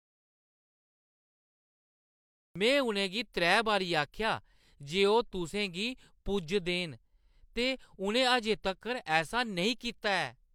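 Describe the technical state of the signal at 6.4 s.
At 6.4 s the speech signal is intact, with no audible fault at that moment.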